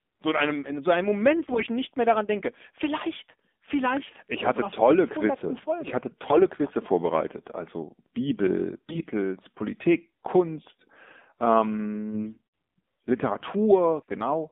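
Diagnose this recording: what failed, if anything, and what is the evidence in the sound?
The whole call went through the AMR narrowband mobile codec. The speech is confined to roughly 200 Hz to 3.6 kHz and has that buzzy, synthetic vocoder edge throughout, which points to a low mode around 7.4 kbps. Classic 2G/3G voice path.

There are also AMR bit errors on the network link at 1.37–1.68 s (between "einem in so einem" and "nicht mehr daran denke"), 6.30–6.42 s, 8.74–9.05 s and 12.11–12.41 s. Pitch and level hold, but the voice goes hoarse and gargly. That's corrupted pulse and gain data getting past the frame checksum at a high error rate.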